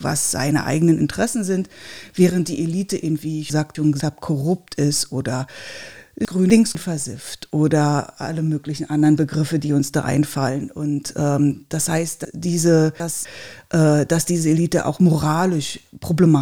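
Speech with three chunks-out-of-order faults, where a 250 ms block of audio plays after the block that should follow it. Between 3.5 and 4.0 s (after "in wie ich") and between 6.25 and 6.75 s (before "versifft oder alle möglichen"), two adjacent blocks are swapped. From 12.25 to 13.25 s, between "ähm das heißt" and "äh dass diese", one block lands three blocks late. Each sounds jumbled. A waveform or spectrogram shows abrupt vertical seams at the joins, with syllable and harmonic contours that jump instead of flowing across the boundaries.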